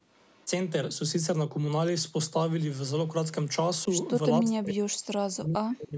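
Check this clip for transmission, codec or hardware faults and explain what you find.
Two call-path faults are audible: a brief echo leak near the start and speech suppressed in double talk at the end.

From 0.11 to 0.48 s there is an echo leak: the far end's echo canceller likely failed to remove its loudspeaker pickup, so the sound returns about 462 ms late. The leaked copy is faint, roughly 35 dB below the main speech, a delayed copy trailing behind it.

From 4.4 s to the end, speech is suppressed in double talk. With both sides talking, the echo canceller likely mistook the local talker for echo and turned it down. Across about a second and a half, the speech dips deeply, by as much as 40 dB. The band is capped at 8 kHz throughout, as expected from call microphone processing.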